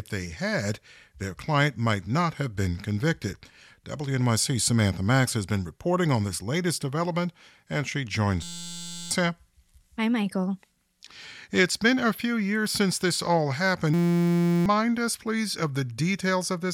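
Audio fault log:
8.43–9.11 s and 13.94–14.66 s, system hang loop: each time the speech stops and is replaced by a steady buzz at 172 Hz. The hardware kept replaying the same 5.8 ms stretch of the ring buffer while the system was frozen, which fits a 256-sample buffer. That is 117 and 124 repeats respectively. A loop this short fuses into a tone at the loop rate rather than a stutter, and roughly 0.7 s of speech is lost at each point.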